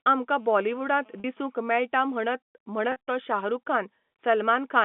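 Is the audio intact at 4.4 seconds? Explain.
Yes, the audio is intact at 4.4 seconds, with the speech carried cleanly through the G.711 telephone coding and its narrow phone-line band.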